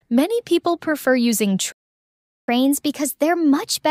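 At 1.72 s the sound cuts out mid-flow and stays silent until 2.48 s, a gap of about 760 ms. This is a playback stall, most likely the player running dry of buffered data or its output thread being blocked, so nothing reached the output.

From 2.48 s to the end, the audio resumes but runs fast. This is catch-up at higher speed: the player resamples its backlog at 1.1 times normal speed to recover the lost time, which raises the pitch by roughly a semitone and a half.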